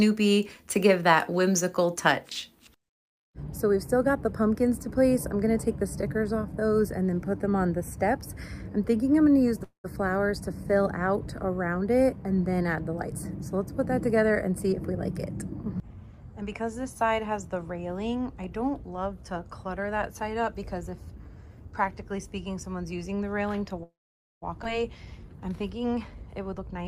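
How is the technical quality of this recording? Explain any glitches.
The recording has clear transmission glitches: two dropouts, several stretches of rushed playback, and one forward jump.

Call audio freeze, at 9.63–10.01 s and 23.83–24.44 s. Packets were most likely delayed in transit and the jitter buffer ran dry. The receiver extended the last sound as a fading fill before falling quiet, for about 0.21 s and then 0.59 s. The second freeze has about 0.5 s of silence. Playback then resumes where it stopped.

Jitter buffer speed-up, at 13.03–14.93 s (107% speed), 15.74–17.11 s (105%) and 26.54–26.78 s (131%). Too much audio had built up in the buffer, so the receiver trimmed tiny pitch-period slices to reduce delay, removing roughly 150 ms, 70 ms and 70 ms. The sound runs faster at unchanged pitch. The last stretch is noticeably hurried.

Skip ahead, at 24.64–24.67 s, right after the second freeze. 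With later audio already queued, about 0.4 s was discarded to recover from the delay. Playback jumps forward with almost no gap, and the two sides are butted together.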